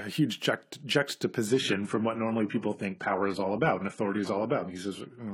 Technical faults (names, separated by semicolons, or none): adaptive stream at a lower bitrate